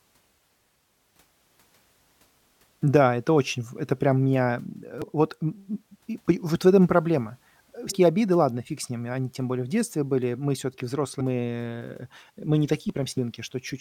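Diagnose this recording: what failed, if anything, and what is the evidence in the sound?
Damaged data in the compressed stream, at the codec stage: short glitches at 5.02, 7.90 to 7.92, 11.19 and 13.17 s as the decoder loses sync and hunts for the next frame.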